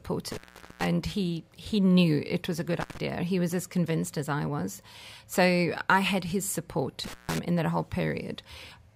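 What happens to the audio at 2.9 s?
Right after "it was a good", the speech drops out from about 2.81 to 2.98 s, and that's an intermittent contact. Somewhere in the signal path a loose plug or cable lost its connection for roughly 120 ms, so the audio simply vanishes. You get crackle at each edge as the contact breaks and then remakes, with faint hiss filling the gap while the line is open.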